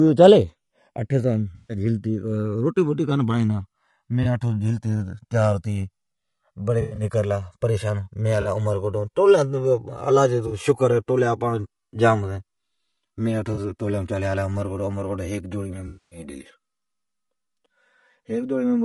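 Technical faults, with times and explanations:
throughout: channels drifting apart. The delay between the two channels slides slowly, reaching about 4 ms. Summed to mono, comb notches sweep through the spectrum, heard as slow flanging. This fits a clock mismatch near 200 ppm.
throughout: low-delay AAC compression. The speech sounds rough and grainy, with noise between harmonics and a thin, synthetic top band. The likely cause is AAC-ELD at a low bitrate, around 32 kbps.
1.55–1.77 s, 4.23–4.26 s, 6.81–7.03 s, 8.41–8.47 s, 10.47–10.53 s, 13.53–13.59 s (just before "سون گلا عمرکوٹ ھیک"), 15.87–16.19 s (just after "گلا عمرکوٹ ھیک جوڑی"): AAC frame loss with concealment. The decoder rebuilt the missing audio from the last good spectrum, leaving smeared, noisy or phasey patches. The gaps fit lost 20 ms frames.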